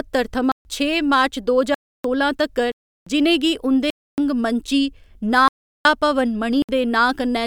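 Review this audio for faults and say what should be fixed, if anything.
The speech drops into blocks of digital silence at 0.52, 1.74, 2.72, 3.90, 5.48 and 6.62 s, lasting 65 to 372 ms. Each cuts out and back abruptly. The longest fits an unfilled 16384-sample buffer. Give the audio thread enough headroom to fill every buffer on time.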